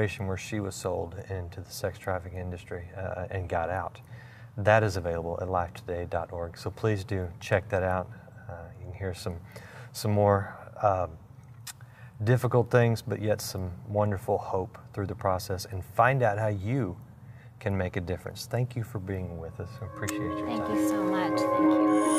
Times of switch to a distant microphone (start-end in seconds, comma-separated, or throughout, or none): none